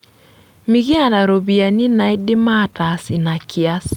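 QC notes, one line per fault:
0.94–1.17 s, phantom power thump: a deep low-frequency bump dying away within about 54 ms, as a supply switched on or off on a live input pushes a DC step through the coupling capacitors. Unlike a handling knock, it has no mechanical rattle or friction noise.
1.81–2.81 s, repeated stalls (stutter): eleven brief hitches, the longest 14 ms, with about 109 ms of held-over sound filling roughly 11% of that second. The jitter buffer keeps running dry and the last sound is stretched. Nothing drops out, so it drags rather than clipping chunks like packet loss.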